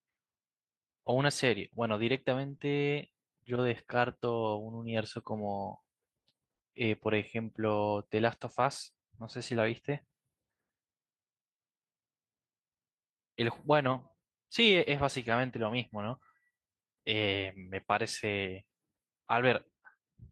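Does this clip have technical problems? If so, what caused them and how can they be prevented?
Yes. Lost packet rebuilt from error correction, 2.49 to 2.55 s: packets went missing, and the decoder played lower-bitrate backup copies instead, so about 40 ms of speech sounds rougher and noisier. This fits two lost packets. A steadier network path, or a larger jitter buffer and higher error-correction bitrate, would help prevent it.

Short concealed packet loss, 2.57 to 2.61 s: about 20 ms never arrived in time, so the receiver extended the preceding sound to fill the hole, leaving a brief smear or wobble. Reducing network jitter and congestion, for example with a wired connection or traffic prioritisation, would prevent this.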